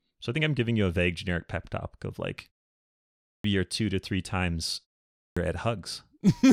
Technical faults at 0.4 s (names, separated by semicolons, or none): none